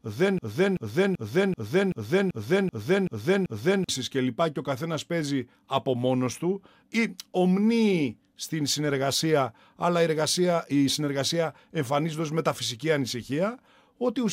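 Right from the start and running to about 3.89 s, there's a broken-record loop: a 384 ms fragment repeats exactly, nine times back to back. Likely the player or stream stalled and kept resending its last chunk, so whatever belonged there is gone.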